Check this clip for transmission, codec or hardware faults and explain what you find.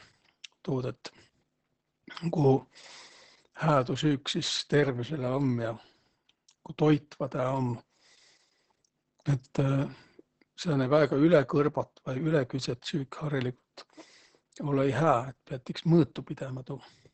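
One fault runs through the whole speech clip: Opus voice compression. The sound points to the SILK coder at about 10 kbps in wideband mode. Its coarse excitation coding causes heavy damage. The voice sounds muffled, hoarse and slightly robotic throughout.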